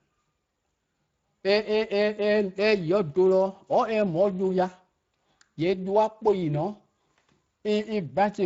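All the way through, the speech carries plainly audible Speex codec damage, a hoarse, noisy edge that points to a middle setting around 20 kbps starving the excitation.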